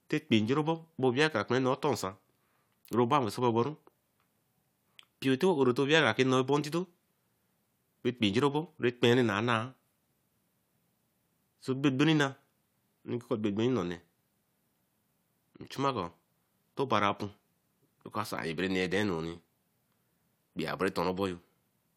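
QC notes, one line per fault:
No technical faults are audible anywhere in the speech signal.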